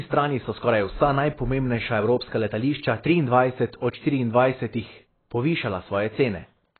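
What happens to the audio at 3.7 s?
At 3.7 s the speech is in the middle of a stretch that is degraded from start to finish, most likely by AAC compression. The encoder appears to have been starved of bits, which fits AAC-LC at a very low rate of around 16 kbps, so it lowered the cut-off and quantised what remained coarsely. The result is dull, muffled speech with heavy smearing and a warbling, fizzy texture on sustained sounds and sibilants.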